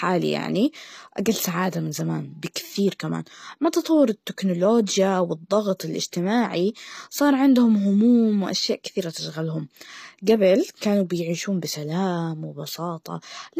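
From start to finish the speech carries plainly audible codec damage. The s sounds come out gritty and metallic, and the treble sounds synthetic, with nothing at all above 14.9 kHz. The likely cause is HE-AAC compression at a low bitrate, around 24 kbps by the sound of it. The codec encodes only the lower spectrum and rebuilds the highs by copying those bands upward, so the upper harmonics no longer match the voice beneath them.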